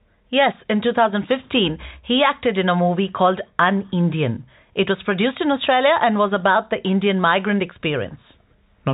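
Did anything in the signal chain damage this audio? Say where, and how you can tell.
No, nothing here is damaged: the speech simply carries the usual G.711 telephone coding sound, with nothing above 4 kHz and only a faint hiss that rises and falls with the level.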